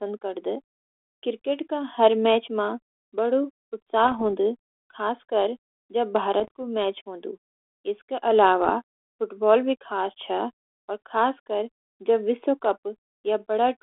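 Bit errors on an ADPCM link corrupt this speech clip three times, at 4.04 to 4.22 s, 6.40 to 6.48 s and 8.64 to 8.70 s, with a small fraction of bits flipped. Each wrong bit knocks the decoder's step size and predictor off track, so the damage rings on briefly as pops, rough bursts and quick level jumps. The narrow telephone band, light grain and 300 Hz to 3.5 kHz range fit a 32 kbit/s G.726 coder.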